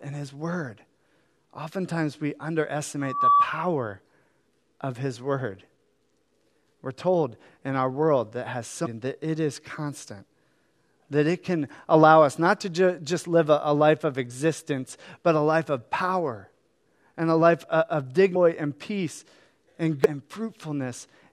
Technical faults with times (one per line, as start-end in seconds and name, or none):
3.01-3.48 loudspeaker feedback squeal
8.85 damaged data in a compressed stream
18.35 damaged data in a compressed stream
20.04-20.06 damaged data in a compressed stream